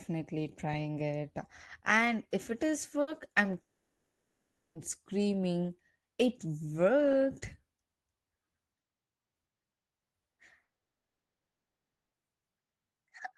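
At 3.01 s, just after "if it is", a burst of packet loss cuts out about 60 ms. The receiver stretches the last sound and fades it out. Speech then resumes slightly further on, with that stretch missing.

From 3.61 to 4.78 s comes what is likely a long network dropout. About 1.14 s of speech is lost. The last sound is held briefly, then about 0.79 s of near silence follows. The same fault likely recurs from 10.63 to 12.16 s. About 1.5 s is gone, and almost all of it is silence.

Throughout, the audio is band-limited to about 12 kHz, consistent with an Opus call codec.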